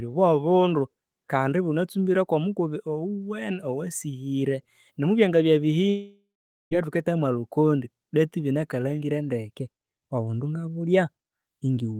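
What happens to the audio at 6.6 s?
At 6.6 s the speech is gone, inside what is likely a long network dropout running from 5.89 to 6.73 s. The receiver stretched the last sound into a fading buzz or hiss, leaving about 460 ms of silence. Unlike a brief concealed packet loss, it lasts nearly a second, and speech resumes with roughly 0.8 s missing.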